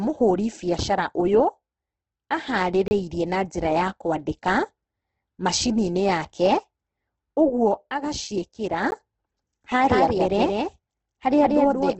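Throughout, the speech sounds grainy and rough with nothing above 8.4 kHz, which fits Opus compression at around 12 kbps. The spectrogram shows a hard ceiling and noisy, smeared bands.

Two blocks of digital silence follow. The first runs 30 ms at 2.88–2.91 s, just before "na njĩra ya", and the second lasts 14 ms at 8.91 s. Each shows as a flat line in the waveform and a sharp vertical gap on the spectrogram.

From 9.87 s to the end there is a doubled audio track: a copy about 5 dB quieter trails by roughly a fifth of a second, likely from a second, slower capture path. It appears on the spectrogram as repeated, time-shifted patterns.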